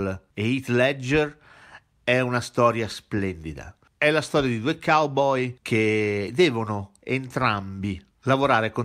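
Nothing goes wrong anywhere in this recording, so there's no fault to walk through at any point along the way.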